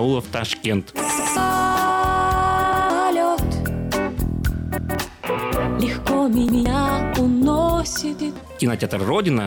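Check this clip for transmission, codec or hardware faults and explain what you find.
A repeated buffer fault occurs five times, at 1.20–1.37 s, 2.73–2.90 s, 4.78–4.95 s, 6.49–6.66 s and 8.19–8.36 s. Each time, fresh audio missed its deadline and the device replayed the previous 0.17 s block once, which fits an 8192-sample buffer. That block plays twice with a hard seam between the copies, and around 150 ms of real audio is skipped. A dropout would leave silence, and an echo would overlap and decay. Here the copy is identical, so it sounds like a stutter.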